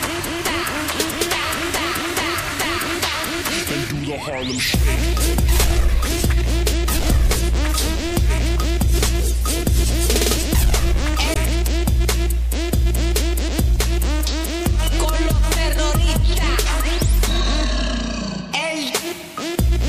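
A stretch of damaged data in the compressed stream hits the audio at 11.33 s. Some bytes in the encoded file were lost, zeroed or overwritten, so the decoder could not read the frames there correctly, fell out of sync and had to hunt for the next valid frame header before it could carry on. What comes out is a short glitch lasting about 40 ms, ending at 11.37 s, that cuts abruptly through the surrounding sound.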